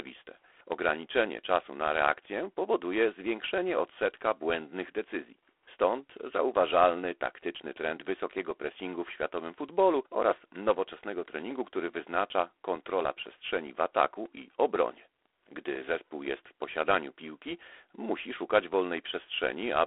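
Throughout the speech runs G.726 ADPCM coding, its harsh rasping hiss rising and falling with the speech level, which fits the 24 kbit/s rate. The spectrogram shows a band of roughly 300 Hz to 3.5 kHz, empty above 3.9 kHz, with grainy noise filling each syllable.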